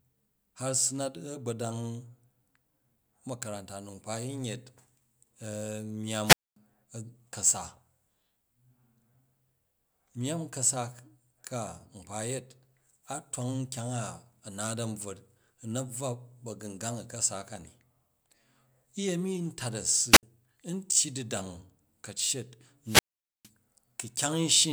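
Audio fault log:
6.23–6.56 s, 20.11–20.23 s, 22.85–23.50 s: wireless microphone squelch dropout. The radio link fades and hiss briefly swells. The receiver's squelch then mutes the output for about 0.24 s, 0.06 s and 0.46 s. Speech resumes once the signal recovers.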